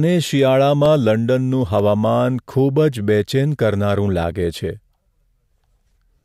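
A speech recording in which a brief run of small, evenly spaced ticks cuts into the sound between 0.86 and 1.79 s, six clicks in all at roughly six per second, each no longer than about two milliseconds. These are CD scratch ticks: a blemish on the disc surface passes the laser once per revolution and ruins more data than error correction can recover, so the player patches or briefly silences those samples on every turn.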